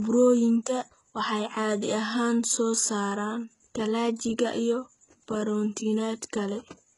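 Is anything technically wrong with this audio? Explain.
Yes, there's one problem, and it runs the whole clip: it's low-bitrate audio saved at a high bitrate. The speech has nothing above about 11.1 kHz, so it sounds dull and a bit smeared, with the swirly, thin quality of heavy compression. That likely comes from a very low-bitrate encode being re-saved later as a high-bitrate MP3. The big second file just preserves the first codec's losses and its cut-off; it can't bring back what was removed.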